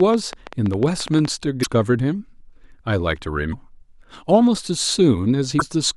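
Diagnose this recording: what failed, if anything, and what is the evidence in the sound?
A train of clicks runs from 0.00 to 1.26 s: around fifteen similar pulses at about 9.6 per second, irregularly spaced, peaking about 5 dB above the speech. The likely cause is interference in the analogue wiring or a faulty connection or power supply. A waveform shows thin spikes; a spectrogram shows broadband vertical lines.

Damaged data in a compressed stream appears at 1.60–1.66 s, 3.49–3.55 s and 5.56–5.62 s as brief squawks or blips. This is a codec or storage fault: the decoder misreads corrupt frames and resyncs. A spectrogram shows short smeared blocks; the waveform shows a discontinuity.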